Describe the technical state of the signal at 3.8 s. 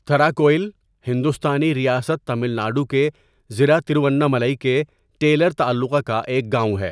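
At 3.8 s the speech signal is intact, with no audible fault at that point.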